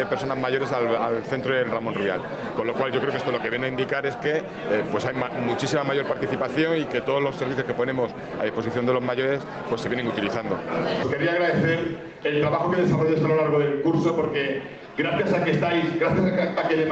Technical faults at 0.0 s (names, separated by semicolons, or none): gain pumping